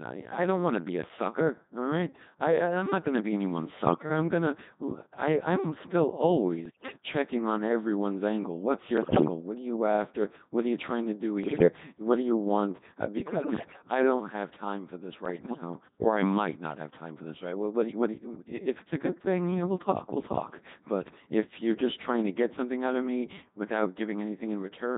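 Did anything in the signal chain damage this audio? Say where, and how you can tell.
Yes. The damage is at the codec stage. The speech sounds robotic and buzzy throughout, the mark of the Codec 2 vocoder at a rate that fits 2.4 kbit/s. Only pitch, voicing, level and spectral envelope survive. The decoder rebuilds speech from sine waves, so the original waveform is gone.

Bit errors on digital voice radio also hit the transmission path. Bursts of bleeps, warbles and pitch jumps occur at 3.86–4.10, 6.66–6.98, 8.98–9.28, 11.44–11.68, 13.18–13.82 and 15.26–15.62 s. Each flipped bit corrupts a whole frame's parameters. The errors are worst near 9 s.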